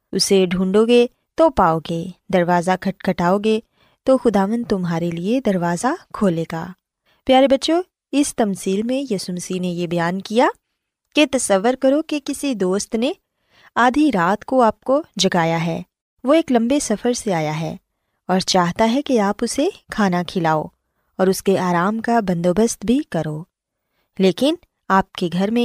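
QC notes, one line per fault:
18.53 s, block of digital silence: the program likely failed to fill one output buffer in time, so about 6 ms of the speech was replaced by zeros, a gap whose length fits a 256-sample buffer. The waveform drops straight to silence and jumps back with no fade, so each edge is a sharp discontinuity. The two edges fall so close together that they merge into a single brief tick rather than an audible hole in the speech.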